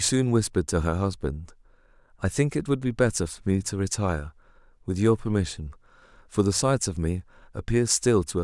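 Nothing goes wrong anywhere in this stretch of speech; there's no glitch, dropout or disturbance to point to at any moment.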